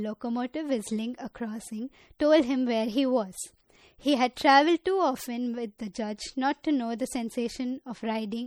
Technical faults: MP3 compression

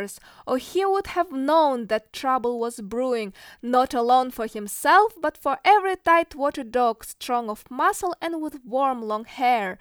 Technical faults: none

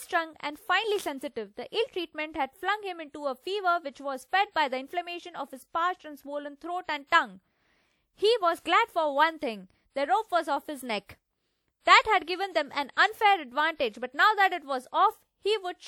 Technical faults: low-bitrate audio saved at a high bitrate

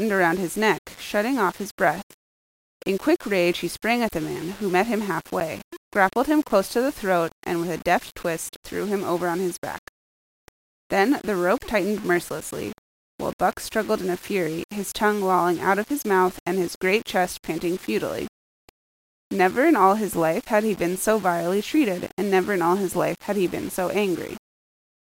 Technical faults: low bit depth without dither; block of digital silence

